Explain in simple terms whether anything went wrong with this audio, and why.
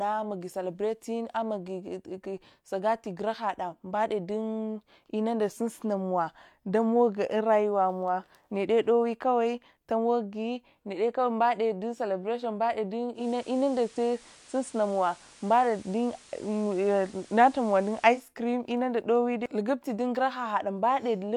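From 13.13 to 18.26 s there's digital radio blending to analogue: the receiver briefly fell back to FM, so hiss creeps in and loudness shifts slightly.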